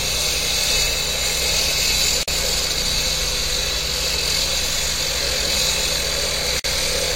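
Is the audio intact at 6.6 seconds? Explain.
No. A gap at a join of encoded pieces opens from 6.59 to 6.64 s. The sound drops out for about 49 ms. It then resumes exactly where it stopped. The edges of the silence are smeared by the codec, so the silent part is shorter. The cause lies in how the audio was assembled. Separate pieces were encoded on their own and butted together untrimmed. The encoder's start-up delay and final-frame padding remained at the seam.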